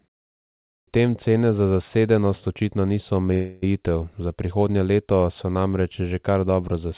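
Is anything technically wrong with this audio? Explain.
Yes, there are two faults in this speech, which comes through a call path whose G.711 mu-law coding at 64 kbps leaves nothing above 4 kHz.

At 0.72 s, after 0.72 s of silence, there is a clipped start after a pause. The output device was still waking from its idle state, so about 153 ms of the opening is swallowed and "tem cene za" begins abruptly. On the waveform the first burst starts at full amplitude with no rising onset. On a spectrogram it appears as a hard vertical edge.

From 3.34 to 3.64 s there is a call audio freeze. The last sound is stretched into a fading buzz or hiss for about 280 ms. The speech then resumes where it stopped, so nothing is lost, but everything after it is 280 ms late. Packets were likely held up and the jitter buffer ran dry. A spectrogram shows smeared, repeating horizontal bands there, and the waveform shows a decaying, patterned stretch.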